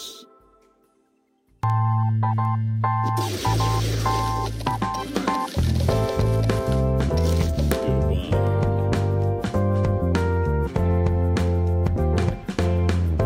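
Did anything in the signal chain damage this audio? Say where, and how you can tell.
Yes. There are word clock ticks from about 0.19 s to 12.98 s: sharp clicks of uneven strength roughly every 0.7 s, around twenty in all. That steady spacing points to the digital link between devices, where the receiving end runs on its own clock instead of locking to the sender. The two clocks disagree by something like 30 ppm, so they keep slipping past each other, and at each slip one sample gets dropped or repeated, which is what makes each tick.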